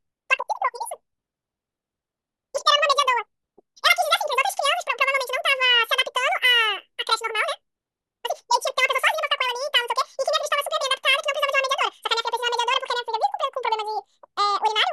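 The clip is speech, and it plays back at the wrong sample rate from start to finish. Everything runs at twice its natural speed. The pitch sits a full octave high, 12 semitones above where it belongs. The voice sounds squeaky and rushed. Speed and pitch shift together because the samples are read out faster than they were captured, with no conversion. The exact doubling fits audio recorded at 24 kHz being played at 48 kHz.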